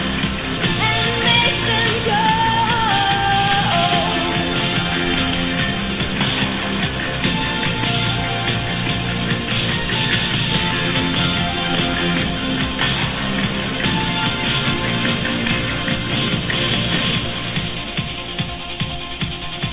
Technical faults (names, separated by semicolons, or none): none